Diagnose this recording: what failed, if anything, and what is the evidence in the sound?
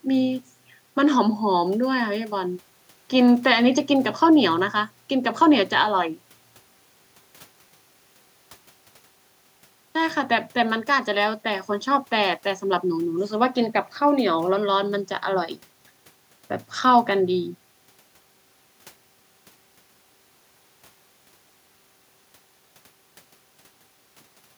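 Nothing failed; no stage shows any fault in this recording.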